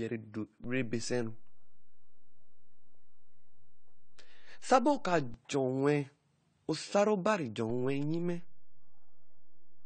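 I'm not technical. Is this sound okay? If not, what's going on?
No. The speech has two problems.

The first runs through the whole clip. The voice sounds dull and plainly smeared, with nothing above about 9 kHz. Sibilant sounds like s and sh come out fizzy or warbly. This is most likely AAC compression squeezed to a small file size, which discards fine detail and smears what remains. A plain filter would also make it dull, but it would not add that watery, fizzy texture.

The second is a DC step. The zero line of the waveform jumps at 0.64 s, holds until 5.34 s, then jumps again at 7.70 s and stays shifted to the end. Each jump (0.64 s, 5.34 s, 7.70 s) is heard as a low thump or click. Unlike a dropout or glitch, the speech itself carries on without any gap or damage through each thump.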